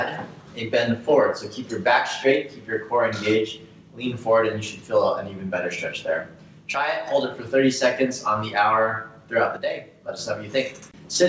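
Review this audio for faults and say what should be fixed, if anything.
Level falls abruptly by about 6 dB from 6.75 to 7.07 s and 9.57 to 10.19 s, likely one channel dropping out before the mono sum. On a waveform the amplitude halves, and on a spectrogram every band dims uniformly up to the 8 kHz ceiling of the G.722 call path. To prevent it, check the stereo connection and capture device for intermittent signal loss on either channel.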